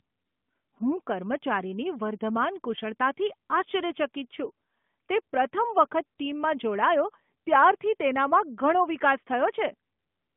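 Nothing stood out on listening to this speech clip.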